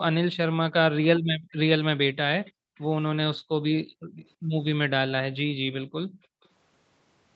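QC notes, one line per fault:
1.2–1.52 s, 2.52–2.75 s, 3.4–4.17 s and 5.5–6.43 s, background gated by the echo canceller: the room tone behind the speech sinks abruptly, as far as about 40 dB at its deepest, then comes back. Each dip lasts a few tenths of a second. The echo canceller is clamping the microphone hard while the far-end loudspeaker is active, muting the ambience along with the echo it targets, and releasing once it relaxes.
2.45–2.81 s, 4.17–4.3 s and 6.24–6.48 s, echo leak: a faint, delayed ghost of the speech trails in roughly a third of a second late, at 333, 337 and 343 ms. It sits about 30, 25 and 40 dB below the direct speech respectively. This is likely loudspeaker playback that the far side's echo canceller failed to fully remove, which was picked up by its microphone and sent back down the call.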